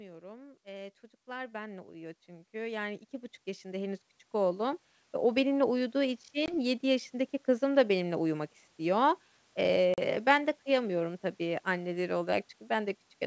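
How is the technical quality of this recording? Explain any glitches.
The speech is wideband, with content reaching up to about 7 kHz and nothing above 8 kHz. That fits G.722 telephone coding. Two faults stand out: a slow level rise at the start and two short dropouts later.

Automatic gain rising runs from 0.18 s to 5.5 s. The automatic gain control judged the input too quiet. It then lifted its gain step by step, by about 18 dB in total. The voice and the background swell together. Over those five seconds the whole recording gets steadily louder.

Packet loss on an ADPCM call appears twice. The first is from 6.46 to 6.55 s. About 20 ms is missing there, roughly one packet. The second is from 9.94 to 9.99 s. About 40 ms is lost there, roughly two packets. Each gap is a hard-edged hole of silence. ADPCM predicts each sample from the ones before it. The decoder's predictor and step size drift away from the sender's during the gap. 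So the speech comes back slightly distorted. It settles within a few tens of milliseconds.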